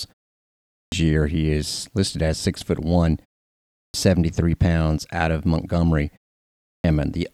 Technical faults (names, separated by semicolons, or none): clipped start after a pause